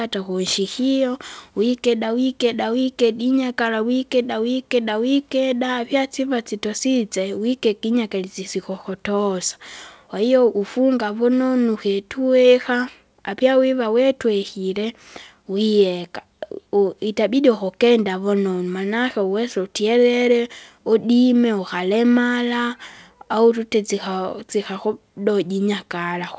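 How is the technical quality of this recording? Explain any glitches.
There are no glitches in this recording; the speech comes through without any audible technical faults. It has passed through a WebRTC call path working normally, and the coding leaves nothing above 8 kHz, which fits a wideband call codec such as G.722 at 64 kbps.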